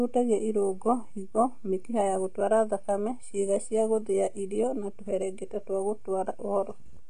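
AAC compression runs throughout the speech, from start to finish. Nothing is present above 9.6 kHz, so the top of the spectrum is simply gone and the voice sounds dull and closed-in. Sibilants and sustained vowels carry a smeared, warbling, fizzy texture. This is likely AAC-LC coding at a low bitrate, with the sound pointing to around 32 kbps: too few bits forced the encoder to drop the high band and coarsely quantise what remained.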